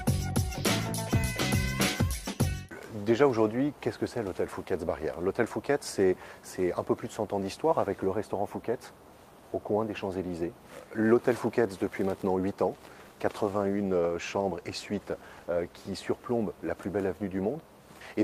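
From 12.73 s to 16.85 s there is a call bitrate drop. A falling bandwidth estimate forces the encoder to spend far fewer bits, so the audio turns coarse and rough for about 3.3 s at its worst, consistent with a fall from about 32 kbps to 17 kbps.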